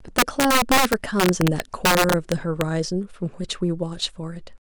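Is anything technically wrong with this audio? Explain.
Yes. The speech suffers from integer overflow throughout. Somewhere in the chain a gain or mix stage pushed the signal about 6 dB past the largest value the integer format can hold. The peaks were not limited. They wrapped around to the opposite sign. Roughly 2 percent of samples exceed the ceiling, so each peak over the limit flips abruptly across the full range. Those flips are heard as violent, harsh cracks, far sharper and uglier than ordinary clipping.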